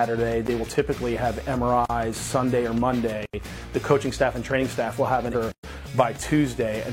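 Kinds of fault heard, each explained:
Block of digital silence: the signal drops straight to zero and returns with no fade. Four such holes sit at 0.47, 1.86–1.90, 3.26–3.34 and 5.52–5.64 s, growing from a 15 ms tick through 40 and 80 ms to a 120 ms gap, the kind left when output isn't supplied in time.
Compressed frames skipped: at 5.30–5.35 s the audio jumps forward instead of stopping, with roughly 400 ms of material missing, about ten frames if each lasts 46.4 ms, as when the decoder drops damaged or absent frames. There is no silent hole, which separates it from the silence blocks.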